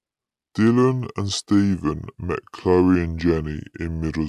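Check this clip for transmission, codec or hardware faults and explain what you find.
The speech throughout the clip sounds low, slow and heavy, sitting roughly 5.5 semitones below where it should be and running at about 0.73 times normal speed. Pitch and tempo have dropped together by the same ratio, the mark of a wrong sample rate. The samples are being clocked out slower than they were captured, with no rate conversion. A ratio of 0.726 fits audio recorded at 44.1 kHz being played back at 32 kHz.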